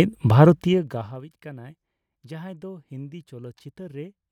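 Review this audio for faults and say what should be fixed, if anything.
Zipper noise runs from 0.48 to 1.24 s as the speech level falls by roughly 25 dB in 2 dB jumps, around twenty per second. Each unsmoothed jump adds a small click, so the drop ticks audibly. Interpolating the gain sample by sample, rather than jumping once per block, would prevent it.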